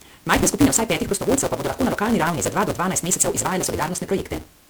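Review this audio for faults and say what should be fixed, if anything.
Block size mismatch (truncated) runs through the whole clip. A steady buzz sits at 172 Hz. The speech runs 1.88 times too fast but keeps roughly normal pitch. The reading stage takes 256-sample blocks and drops the tail of each longer written block. Match the block sizes between stages, or buffer the excess instead of discarding it.

The speech also sounds swirly, smeared and hollow for its whole length, and consonant attacks are blurred. The likely cause is generation loss: repeated MP3 decoding and re-encoding, about five passes, in a chain that points to 128 kbit/s. Each pass re-quantises on a shifted frame grid, so the damage compounds. Keep a lossless master and encode to MP3 only once, at the final step.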